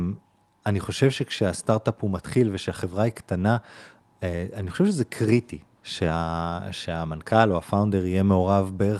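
No technical faults can be heard in this speech recording.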